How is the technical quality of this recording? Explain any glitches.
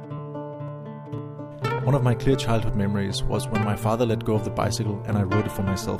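Two small glitches, both the same kind: compressed frames skipped. At 1.78 s the audio jumps ahead by roughly 50 ms, around two frames, and at 5.46 s by roughly 30 ms, about one frame, which fits a frame length of about 26 ms. Whole frames just never got played, either missing or rejected by the decoder. Because neighbouring frames overlap, each join comes out as a quick smeared blip rather than a hard click.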